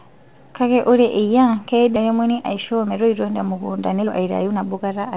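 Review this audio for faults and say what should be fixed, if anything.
A skip ahead at 1.96 s, right after "ore eyia", drops about a second of speech. The waveform and spectrogram show an abrupt splice with no silent gap. A jitter buffer speed-up from 2.06 to 4.99 s then trims short pitch-period chunks, running speech at 112% with unchanged pitch. The spectrogram shows compressed syllable spacing, and about 0.4 s is removed in total. All of it sits under the 4 kHz ceiling expected of the G.711 mu-law call path. To prevent both, smooth the delivery of late packets and let the jitter buffer recover delay more gradually instead of discarding whole stretches.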